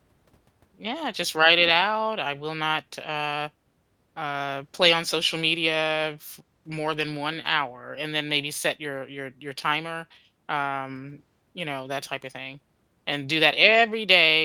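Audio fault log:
No faults were heard in this speech clip. There is nothing to enter in the log.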